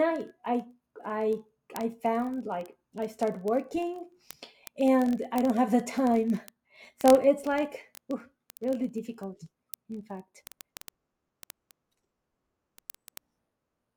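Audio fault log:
0.11–13.95 s, word clock ticks: a fast, steady crackle of sharp ticks of uneven strength runs under the speech, about every 20 ms (roughly 50 per second, several hundred in all). Each tick is a single-sample slip. The receiving device is running on its own clock, not locked to the digital link's sender. The clocks drift apart by roughly a thousand parts per million, so a sample is misread and dropped or repeated each time they slide past each other.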